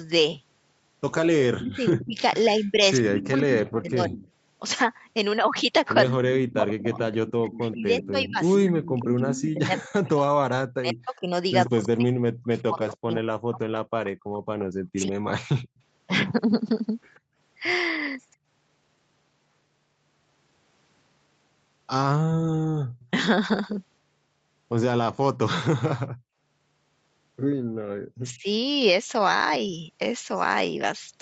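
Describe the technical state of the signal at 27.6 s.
At 27.6 s the background is gated by the echo canceller. From 27.61 to 27.84 s the room sound under the speech is pushed down hard, by about 31 dB at its deepest, for roughly a fifth of a second before it returns. While loudspeaker playback was active, the canceller suppressed the whole microphone signal rather than removing only the echo, so the ambience briefly collapses to near silence within the call path's 8 kHz band.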